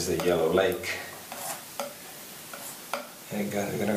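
No technical faults can be heard anywhere in the audio. Nothing interrupts, distorts or drops out at any point.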